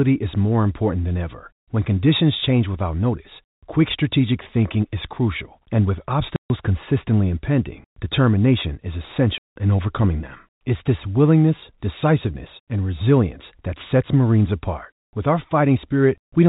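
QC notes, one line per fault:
6.36–6.50 s and 9.38–9.56 s, packet loss filled with silence: sudden dead gaps of 140 and 180 ms with hard edges, as missing packets were replaced by silence, which fits 20 ms packets.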